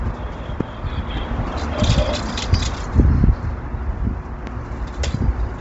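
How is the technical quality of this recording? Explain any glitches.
The recording has two kinds of damage: heavy codec degradation across the whole clip and two isolated loud pops.

Throughout, the audio shows heavy damage that is most likely Bluetooth LC3 compression. Nothing is present above about 7.8 kHz, and the upper band that remains sounds breathy and grainy rather than clean. LC3 works on short transform frames, here consistent with 7.5 ms. When bits are scarce, the encoder zeroes much of the high spectrum and fills it with synthetic noise. The degree of damage fits a low rate near 24 kbps.

At 0.61 to 0.63 s there is a loud pop, a single sharp transient standing well above the surrounding sound. A second loud pop occurs at 4.47 to 4.49 s, somewhat less prominent but still clearly louder than the material under it. Each is a single short click-thump, and the sound continues uninterrupted beneath it. 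The likely cause is a sudden voltage step or pulse, such as a connector, switch, static discharge or driver glitch, which the downstream circuitry shapes into a brief burst.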